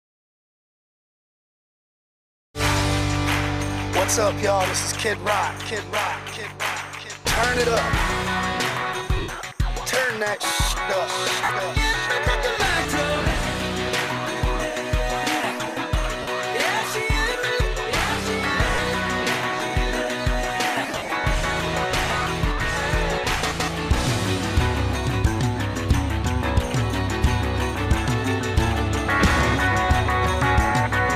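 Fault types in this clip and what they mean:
lost LE Audio frames: the LC3 decoder patched five gaps (9.16 to 21.12 s) by reusing the last spectrum with random signs, leaving noisy smears.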